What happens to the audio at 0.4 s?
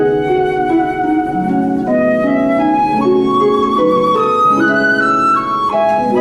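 Nothing goes wrong at 0.4 s; the audio plays through that moment intact, with no dropout, click or other fault.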